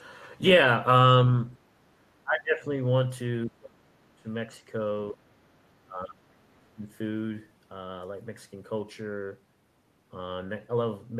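Speech in which the level repeatedly sinks, at 1.83–2.69 s, 3.46–4.28 s, briefly at 5.12–5.17 s and at 5.84–6.83 s, by up to about 30 dB. This is speech suppressed in double talk, likely an echo canceller muting its own talker.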